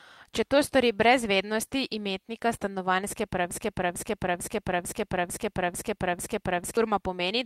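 At 3.51 s the speech catches on a short fragment, about 0.45 s long, and replays it exactly, back to back, seven times, until 6.77 s. It is a broken-record loop: the same snippet stutters like a stuck groove, and whatever should have been said during those three seconds never arrives. The likely cause is a stall in the player, encoder or stream, which kept resending the last piece of audio it held.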